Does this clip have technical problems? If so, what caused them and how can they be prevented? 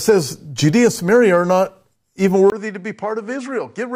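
Yes. At 2.5 s the input likely switched to a poorer device: after a 20 ms gap, the speech runs about 10 dB quieter, with nothing above 10.5 kHz. Fix the recording input to one device and turn off automatic device or headset-profile switching before recording.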